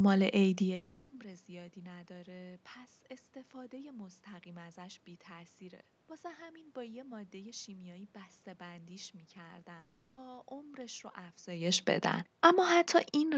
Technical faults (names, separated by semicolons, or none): long network dropout